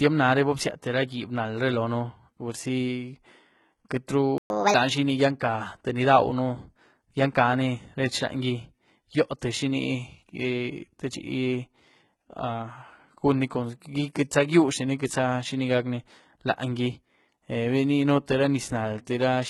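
Across the whole speech clip the treble sounds synthetic: s sounds come out gritty and lispy, with a metallic sheen. This is likely HE-AAC compression at heavy damage, at a bitrate of about 16 kbps. Only the lower spectrum is properly coded. The upper range is rebuilt by copying lower bands upward under a rough envelope, so its harmonics fail to line up with the real ones.

At 3.89 s a short burst of hiss smears in just ahead of a sharp onset, softening the attack. This is pre-echo, spread over about 19 ms. The transform codec distributes its quantisation noise evenly across a whole block, so noise sized for the loud attack also fills the quiet moment just before it.

From 4.38 to 4.50 s the audio drops out abruptly in mid-flow, a silent gap of 120 ms. This is a playback stall, most likely the player running out of buffered data or having its output thread blocked, so nothing reached the output until it recovered.

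Immediately afterward, from 4.50 to 4.74 s, the speech rushes and rises in pitch by roughly seven semitones. This is catch-up at higher speed: the player resamples its backlog at 1.5 times normal rate to recover the time lost in the stall. Because it speeds up by resampling, pitch rises along with tempo.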